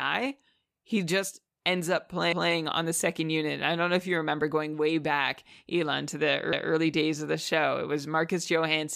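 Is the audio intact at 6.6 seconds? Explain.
No. From 6.53 to 6.73 s there are overlapping chunks: the audio was handled in 4-second chunks, and this one began before the previous had finished, so about 200 ms plays twice. Between "to the" and "days of the show" it is heard as a brief stutter.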